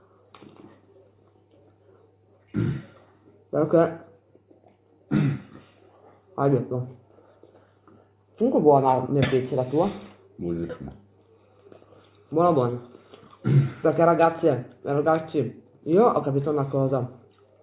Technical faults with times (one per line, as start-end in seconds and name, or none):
none